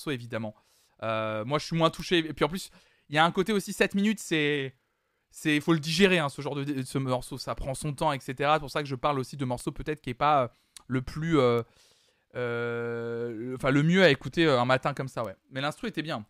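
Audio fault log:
2.00, 9.60, 11.59 and 15.25 s, bit error spike: each is a single-sample jump, about -16 dBFS for the first two and about -22 dBFS for the last two, from one flipped bit pushing the value by a power of two, heard as an isolated broadband tick unrelated to the speech.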